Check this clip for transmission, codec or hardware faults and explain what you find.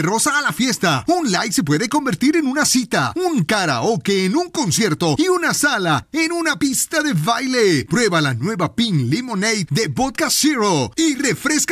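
Nothing wrong can be heard anywhere in this recording.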